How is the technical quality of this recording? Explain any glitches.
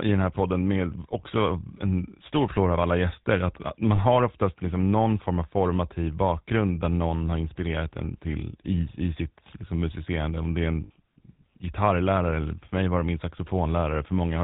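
The speech is plainly audibly coded throughout, with two short dropouts.

GSM full-rate codec, whole clip: pulse-driven vocal-tract modelling, with nothing passed above 4 kHz, gives a plainly audible buzzy, gravelly roughness consistent with 13 kbps.

Lost GSM frames, 3.96–3.99 s and 10.84–10.91 s: the last good frame's settings are repeated, producing a rough, metallic ring, longer at 10.84 s.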